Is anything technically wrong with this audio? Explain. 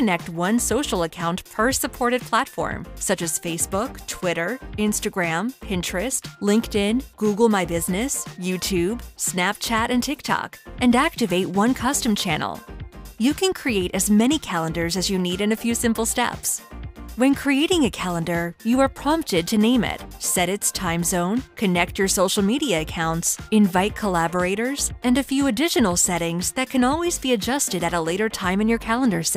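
No, nothing technically wrong turns up here; it all sounds fine from beginning to end.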